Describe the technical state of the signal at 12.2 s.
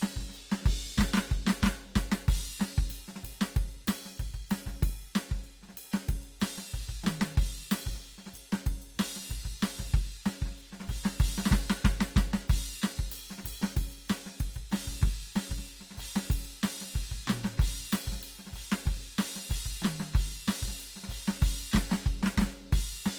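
Opus compression at 12.2 s, as throughout: the music sounds grainy and rough, likely from CELT-mode Opus at a low rate consistent with about 24 kbps, filling starved bands with noise.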